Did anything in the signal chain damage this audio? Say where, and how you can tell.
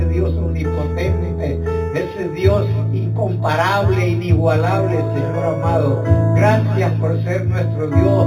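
Yes. Imaging from linear upsampling at the sample-rate conversion stage runs throughout: going from 8 kHz to 48 kHz by straight-line interpolation leaves the top dulled, with a faint mirrored band between 4 and 8 kHz, about 30 dB down, heard as metallic shimmer and visible on a spectrogram as a reflection above 4 kHz.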